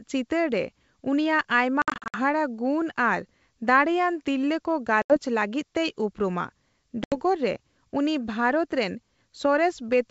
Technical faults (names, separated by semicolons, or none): packet loss on an ADPCM call